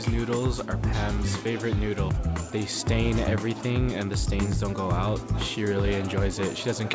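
No technical faults can be heard in this audio. It has passed through a WebRTC call path with a wideband call codec, and the band stops at 8 kHz, as expected from a G.722 link.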